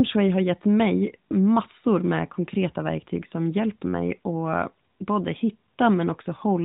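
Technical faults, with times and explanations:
Nothing in the recording stood out as a technical fault on listening.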